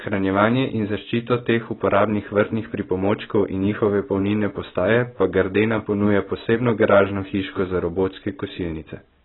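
AAC compression damage runs through the whole recording. Nothing survives above 4 kHz, so the speech sounds dull and boxed-in, and the damage is heavy: sibilants turn fizzy and smeared, and sustained vowels carry a warbling, watery texture. The likely cause is low-bitrate AAC-LC, which at a rate as low as 16 kbps lowers the cut-off, drops whole bands, and quantises what remains coarsely.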